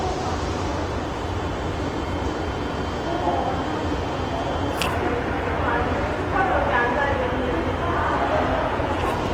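Throughout, the sound shows plainly audible Opus compression, likely from music-mode encoding at a rate that fits about 16 kbps. Band energies hold, but fine detail is filled with folded or noise-like content, so tones sound rough and grainy. Content still reaches 20.2 kHz.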